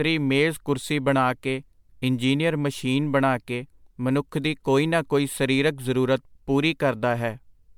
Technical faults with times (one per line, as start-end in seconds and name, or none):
0.00-7.78 generation loss